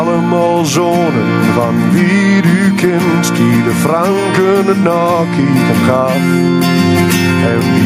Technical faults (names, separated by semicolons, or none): gain pumping; word clock ticks